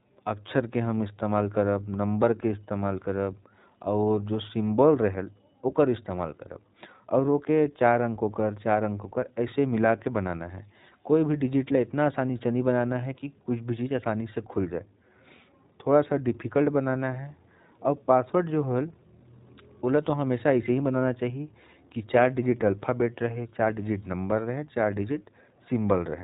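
Speech passed through the iLBC codec, its 20 ms frames coded independently at what sounds like 15.2 kbps, leaves nothing above 3.8 kHz and a plainly rough, synthetic edge throughout.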